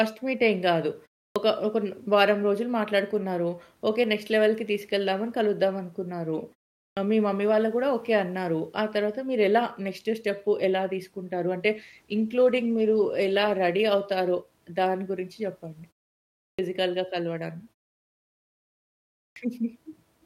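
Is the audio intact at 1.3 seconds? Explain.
No. At 1.31 s there is a clipped start after a pause. After about 0.32 s of silence, the output device has dropped into a low-power or unlocked state, and it needs time to come back. The first 47 ms of speech, from 1.31 to 1.36 s, are swallowed. The word therefore begins abruptly, missing its initial sound, as if it were cut in mid-onset rather than rising naturally out of the silence.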